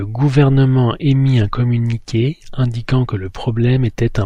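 Nothing goes wrong anywhere in this bit of speech, so there's no fault to point to here.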